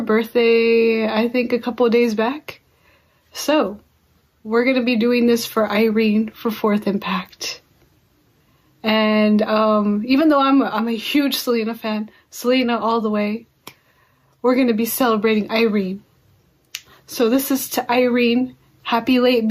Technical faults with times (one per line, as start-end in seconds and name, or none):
0.00-19.50 gain pumping